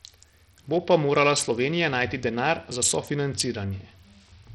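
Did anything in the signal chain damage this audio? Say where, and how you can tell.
Yes. The damage sits at the codec stage and runs through the whole speech clip, most likely from Bluetooth SBC compression. The top end drops out and flickers, and a gritty, aliased roughness rides on the speech, consistent with a starved bit pool around 64 kbps. The simple bit allocation leaves the weak upper bands with almost no bits, and the rest are coarsely quantised. On a spectrogram the treble shows as broken, blinking blocks, and the waveform carries grainy noise on the speech.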